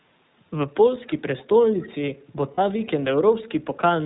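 The whole thing runs through the iLBC codec, and you can plainly hear it: the speech is band-limited to nothing above 4 kHz and has that slightly rough, synthetic edge. Each 20 ms chunk is coded on its own at around 15 kbps, which is where the grain comes from.

At 1.07–1.13 s, 1.38–1.45 s and 1.8–1.87 s there are short scraps of echo leak. A faint copy of the speech trails the original by about 252 ms, sitting roughly 25 to 30 dB down. Most likely a far-end speakerphone's echo canceller didn't fully catch its own loudspeaker.

At 2.54–2.59 s there's a 40 ms patch of lost iLBC frames, which fits two dropped 20 ms frames. The decoder fills the gap by repeating the last pitch cycle with some noise mixed in, so you get a brief held vowel, slightly buzzy or breathy. The speech snaps back right after.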